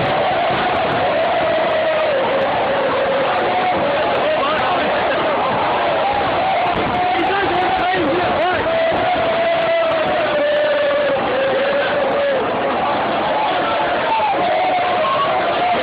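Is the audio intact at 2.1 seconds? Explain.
Yes, the audio at 2.1 seconds is intact, with no dropout, click, distortion or other technical fault audible at that moment.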